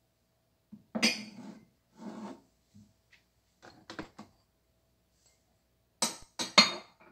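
At 4.03 s and 6.23 s a DC step shifts the waveform's zero line by about -41 dBFS, decaying through a 20 Hz high-pass. Each step sounds like a low thump.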